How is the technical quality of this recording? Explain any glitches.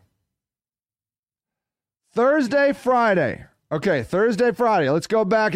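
No glitches turn up on a listen to this speech, and nothing in the transfer calls for comment.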